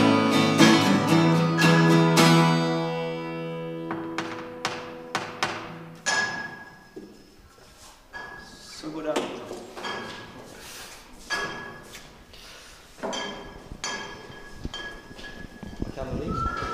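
No audible technical faults here.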